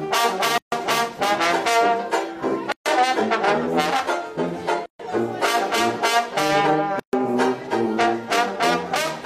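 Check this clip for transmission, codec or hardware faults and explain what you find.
Gaps at joins of encoded pieces appear at 0.58–0.72 s, 2.72–2.86 s, 4.86–4.99 s and 6.99–7.13 s, repeating every 2 s. Each piece kept its encoder's start-up delay and last-frame padding, so a gap of about 140 ms cuts into continuous sound, its edges smeared so the silent part is shorter. The sound then resumes where it stopped.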